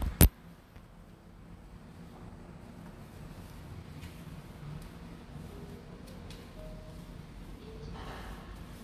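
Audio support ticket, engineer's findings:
No faults found: the everyday sound in this clip shows no audible dropouts, clicks, distortion, level jumps or timing problems anywhere in the recording.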